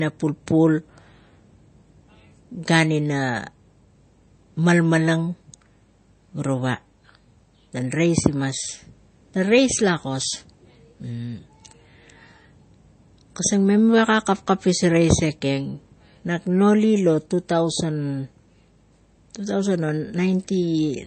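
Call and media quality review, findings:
MP3 compression throughout: nothing above 8.3 kHz, watery swirl on s sounds; likely low-bitrate encoder, fits about 32 kbps. Swirl separates it from a plain low-pass.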